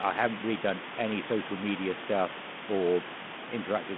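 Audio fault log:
Nothing to log here, just speech coming through a telephone-band line with some room noise sitting well beneath it.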